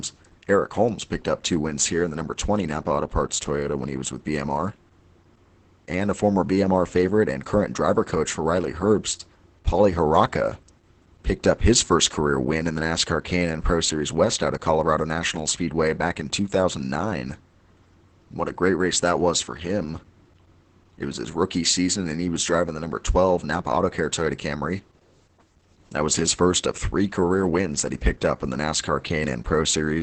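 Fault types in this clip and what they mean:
Opus voice compression: The speech runs through a low-rate voice codec for the whole clip, coded by its linear-prediction SILK mode in wideband, so nothing is left above about 8.7 kHz and sibilants and breath lose their top. The excitation is coded coarsely, and the damage is heavy: the voice sounds muffled, hoarse and somewhat robotic throughout, which fits a bitrate of about 10 kbps.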